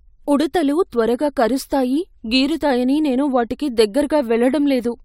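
No technical faults can be heard in this speech recording.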